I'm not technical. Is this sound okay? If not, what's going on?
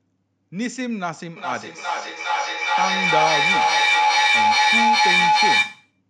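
No. Feedback howl from 1.36 to 6.0 seconds: two devices on one call keep re-amplifying each other's sound into a steady whistle, pulsing roughly every 0.4 seconds.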